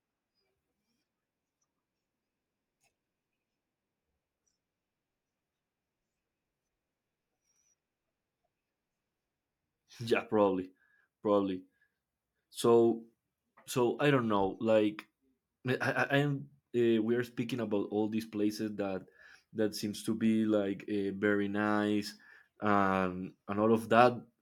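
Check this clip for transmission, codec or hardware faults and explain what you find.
I find no faults to explain in this clip.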